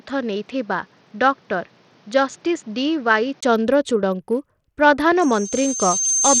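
Throughout, the treble is gritty and flickering, with grainy quantisation noise. This is likely Bluetooth SBC compression, consistent with a low bit pool near 80 kbps. From 0.0 to 3.43 s the speech is duller, with nothing above 7.2 kHz and a faint added hiss, likely an input switched to a poorer device. A 20 ms gap marks the switch back. From 5.16 s to the end, a loudspeaker feedback squeal at 6.3 kHz swells over about a second until it is roughly as loud as the speech.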